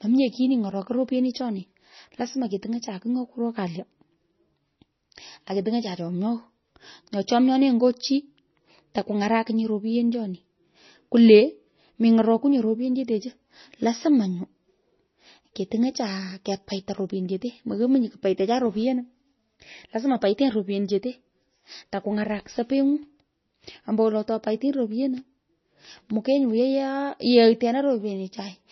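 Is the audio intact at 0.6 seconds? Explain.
No. At 0.6 s, as throughout the clip, the speech carries heavy damage from likely MP3 compression at a very low bitrate, something near 24 kbps. Starved of bits, the encoder has removed everything above 6 kHz and dropped weaker frequency lines that switch on and off between frames. The result is dull, band-limited speech with a watery, swirling texture, metallic chirps on s sounds, and smeared consonant attacks.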